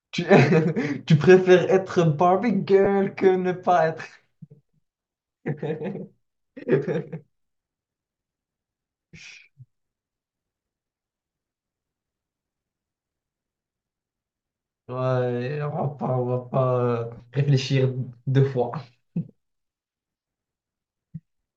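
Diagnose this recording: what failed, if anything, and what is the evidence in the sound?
The failure is at the network stage, in the Bluetooth LE Audio link: lost LE Audio frames at 2.84 to 2.87 s and again at 17.17 to 17.20 s. Each gap lasts about 22.5 ms, which fits three 7.5 ms LC3 frames. The decoder fills the hole by repeating the last good spectrum with randomised signs, so the speech briefly turns into a short, noisy smear rather than a clean dropout. The light codec compression is separate from these two events.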